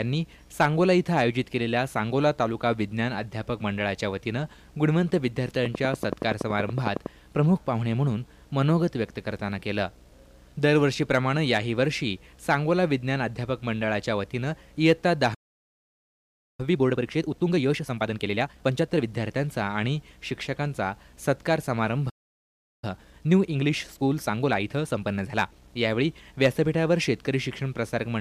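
From 5.66 to 7.07 s a train of clicks runs over the sound, about fifteen evenly spaced pops at 10.7 per second, standing roughly 15 dB above the signal. They are likely interference or a faulty connection or power supply. Each shows as a thin vertical stripe across the spectrogram and a sharp spike in the waveform.

At 15.34 s a playback stall cuts the sound off mid-flow for 1.25 s, likely because the player ran short of data or its thread was blocked. A second stall follows at 22.09 s, lasting 0.73 s. Both appear as flat silent gaps in the waveform and blank columns on the spectrogram.

Each stall is followed by time-compressed catch-up, with the player dropping and cross-fading short pieces to clear its backlog. From 16.60 to 19.08 s the audio runs 1.5 times fast, then 1.25 times fast from 22.84 to 25.76 s, both at normal pitch. On the spectrogram, events bunch closer together while harmonic spacing stays unchanged, and small seams show at the splices.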